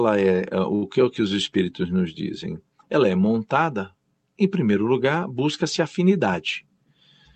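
At 0.75 s, just after "é é", a short stall from a late packet holds the speech for about 68 ms. A packet missed its playout time, the jitter buffer ran dry, and the receiver stretched the last sound until the packet arrived. It then resumed from the same place before "que é o que", so nothing is lost, but one sound drags with a faint buzz or dip. On a spectrogram the harmonics run flat and repetitive across that gap. The waveform shows a repeated cycle shape in place of natural variation.

From 6.42 to 6.95 s a jitter buffer speed-up makes the speech play about 7% faster. Extra audio had built up in the buffer, so the receiver trimmed whole pitch periods again and again, removing roughly 40 ms in total. The pitch stays the same, but the speech sounds slightly rushed. On a spectrogram the formant movements look compressed in time, and the waveform shows small splices between cycles. Across the clip, the call codec's band limit appears as energy ending near 8 kHz.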